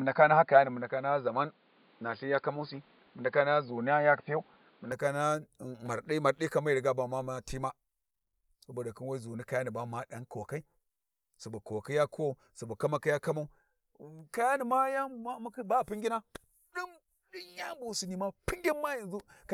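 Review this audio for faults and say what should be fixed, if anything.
From 0.0 to 4.92 s the speech is dull and boxy, with nothing above 5 kHz, then clears abruptly without a gap, likely from an input switched to a poorer device. The level also shifts by roughly 5 dB, and the background noise, about 40 dB down, changes character at the switch, which a simple filter or bandwidth drop would not cause. Lock the recording to one fixed microphone so the system cannot change input devices mid-session.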